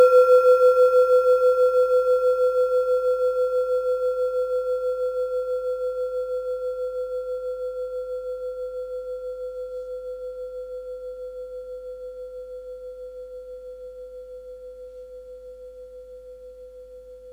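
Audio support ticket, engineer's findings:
Crude rate conversion, present throughout. Gritty, inharmonic fizz tracking loud and bright passages. Points to a 48 kHz to 44.1 kHz change made by dropping nearest samples, unfiltered. Error sits around 35 dB below the sound.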